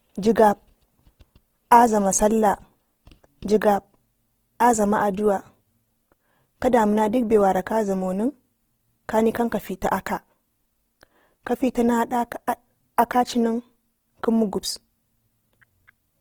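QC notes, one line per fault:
Throughout: Opus compression, likely a music-mode encode around 16 kbps; starved bands are refilled with folded or noise content, making speech plainly grainy and rough.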